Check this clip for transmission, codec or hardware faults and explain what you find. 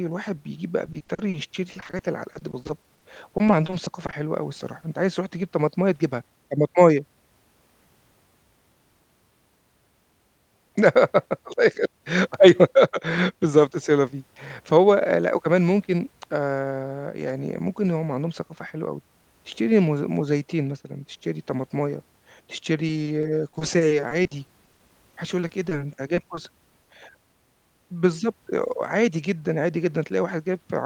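Two transmission faults are audible in this speech clip.

From 0.85 to 4.15 s and again from 22.87 to 26.89 s, the speech turns choppy and robotic. This is repeated packet loss: dozens of short holes, up to 40 ms each, are patched by stretching out the preceding sound.

From 11.85 to 12.29 s, the speech briefly sounds hurried at about 108% speed with unchanged pitch. This is a jitter buffer speed-up: about 40 ms of pitch periods were trimmed to reduce the backlog.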